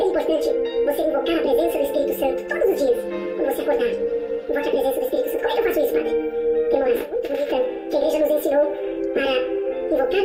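The whole clip plays with a wrong sample rate. Everything runs at twice its natural speed. Pitch sits a full octave, 12 semitones, too high. Speed and pitch shift together, which fits audio recorded at 24 kHz being played back at 48 kHz without conversion.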